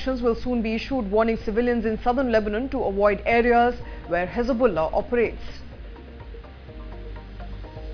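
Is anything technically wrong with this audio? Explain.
No, nothing technically wrong stood out on listening to this audio.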